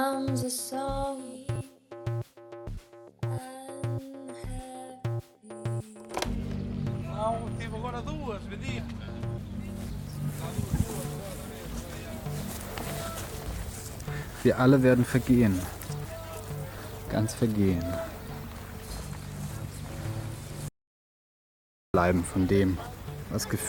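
Compressed frames skipped occur at 1.55, 2.74, 8.78, 16.78 and 19.71 s. Whole 10 ms frames never reach the output. The sound jumps ahead by roughly 30 to 70 ms each time.

From 20.68 to 21.94 s there is an audio dropout to silence, lasting 1.26 s. The sound cuts out mid-flow into silence with no room tone. The likely cause is lost input while recording continued.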